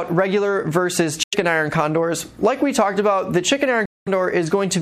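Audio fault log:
1.23–1.35 s and 3.85–4.08 s, Bluetooth dropout: the sound cuts out completely for roughly 0.12 s and then roughly 0.23 s, so the second gap is about twice as long. When it comes back, it has moved on, as if it kept playing through the silence. That pattern likely means audio packets reached the headphones too late and were thrown away, leaving nothing to play until fresh packets arrived.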